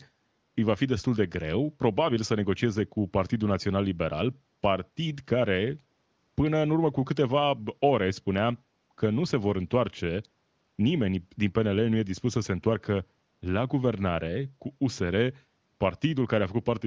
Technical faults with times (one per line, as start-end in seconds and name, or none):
none